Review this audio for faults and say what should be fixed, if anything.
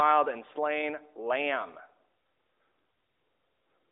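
Nothing here needs fixing. The speech carries the narrowband sound of a mobile call through the AMR narrowband mobile codec, confined to roughly 300 Hz to 3.7 kHz, and its light coding texture fits the codec's top 12.2 kbps mode.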